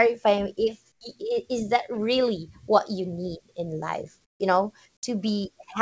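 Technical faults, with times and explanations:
0.92–1.01 s and 4.25–4.40 s, comfort noise in place of the background: the sender likely paused transmission during these speech gaps, and the receiver filled them with generated noise. The natural background, already about 46 to 47 dB below the loudest sound, gives way for 90 ms and then 150 ms to a flat, featureless hiss, about 13 dB and about 20 dB quieter. Across the clip nothing is heard above 8 kHz.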